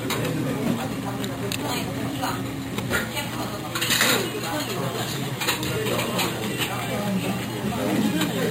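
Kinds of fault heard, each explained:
Imaging from sample-and-hold upsampling: each sample was repeated to raise the rate, which fits a jump from 11 kHz to 44.1 kHz, leaving mirrored copies between 5.5 and 11 kHz at about 12 dB down. Unlike steady hiss, this metallic fizz rises and falls with the sound.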